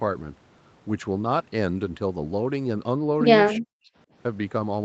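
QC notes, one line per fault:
3.57–3.9 s, speech suppressed in double talk: the speech sinks, at its deepest by roughly 40 dB, for about a third of a second, then recovers. This is likely the call's echo canceller, hearing both ends at once, mistaking this talker for loudspeaker echo and turning the speech down. The microphone path itself carries nothing above 8 kHz, which is normal for call processing.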